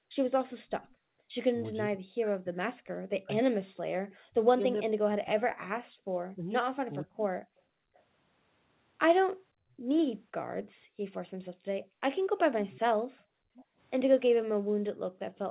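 From 0.00 to 4.02 s the room sound underneath the speech dips sharply, by about 40 dB at its deepest, for under a second in all. This is background gated by the echo canceller, which clamps the microphone while the far end's loudspeaker plays.

From 0.39 to 0.94 s a faint copy of the speech returns about half a second late (506 ms), roughly 30 dB below it. This echo leak is likely the far end's echo canceller letting part of its loudspeaker pickup through.

From 1.83 to 7.21 s the talker's speech repeatedly sinks or breaks up, by roughly 40 dB at worst and for around three seconds in total. This is speech suppressed in double talk, likely because both sides were speaking and the canceller turned down everything it couldn't separate.

The echo leak recurs briefly at 4.10 to 4.16 s (513 ms delay), then at 7.59 to 8.02 s (520 ms, fainter at roughly 35 dB down).

From 7.68 to 15.38 s the background is gated again, with drops of about 40 dB that add up to roughly three seconds.

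From 12.69 s to the end the echo leak is stronger, arriving 532 ms late at roughly 25 dB below the speech. Throughout, the narrowband call path caps the audio at 4 kHz.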